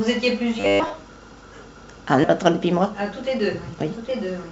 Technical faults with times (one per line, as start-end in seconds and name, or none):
0.60-0.94 robotic sound from repeated short buffers
2.24-2.26 skip ahead
2.66-4.50 jitter buffer speed-up